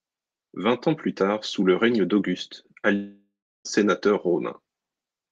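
At 2.95 s the speech stops until 3.67 s. A fading buzz fills the gap, then silence. Likely a long network dropout losing 0.7 s.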